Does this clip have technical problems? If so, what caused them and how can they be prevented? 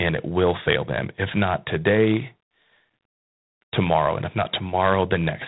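Yes. Throughout the speech there is a harsh, rasping hiss that rises and falls with the level of the voice, and the sound is confined to the telephone band with nothing above 4 kHz. This is G.726 ADPCM coding, plainly audible here. The codec sends only a few bits per sample describing the error of an adaptive prediction, and the coarseness of the grain fits the 24 kbit/s mode, which uses 3 bits per sample. The call microphone processing trims only the lowest bass. To prevent this, run the link at 32 kbit/s or use a wideband codec.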